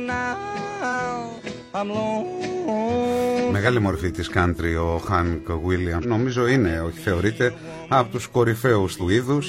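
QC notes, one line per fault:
0.89 s, 3.63–3.68 s, 5.99–6.06 s and 8.97–9.02 s: damaged data in a compressed stream. Bytes in the encoded stream were corrupted at these points. The decoder misreads the affected frames, loses sync and hunts for the next valid frame header. Each event is a brief chirp or blip, 10 ms at the first and roughly 50 to 60 ms at the rest, where the correct audio is briefly replaced by garbage output.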